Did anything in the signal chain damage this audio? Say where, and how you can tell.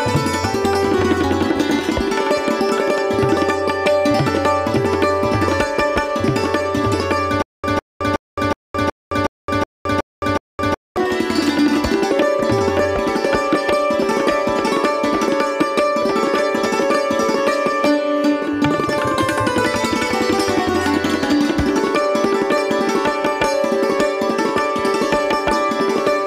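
Yes. From 7.42 s to 10.97 s there's a stutter with silent gaps: the same 153 ms burst comes back nine times, each followed by about 216 ms of dead digital silence, so it pulses evenly every 369 ms. That's most likely a playback or streaming stall. Each retry replays the last fragment it had, then runs dry, and whatever should have played in that stretch is simply gone.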